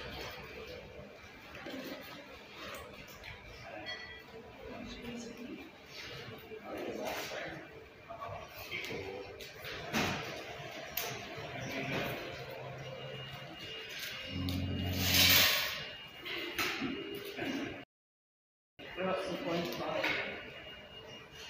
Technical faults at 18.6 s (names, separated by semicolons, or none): rebuffering stall